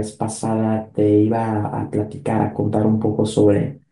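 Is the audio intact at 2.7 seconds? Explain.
Yes, the speech at 2.7 seconds is intact, with no fault to be heard at that moment.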